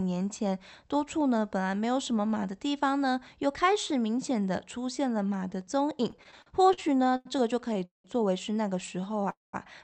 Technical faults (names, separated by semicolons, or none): repeated stalls (stutter); call audio freeze